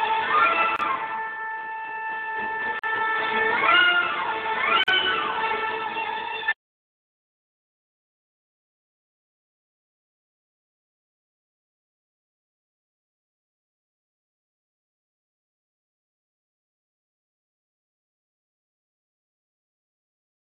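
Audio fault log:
0.76, 2.79 and 4.84 s: gap at a join of encoded pieces, recurring every 2.0 s. Separately encoded segments were butted together untrimmed, so encoder start delay and last-frame padding leave gaps of 29, 43 and 43 ms with smeared edges before the sound resumes where it stopped.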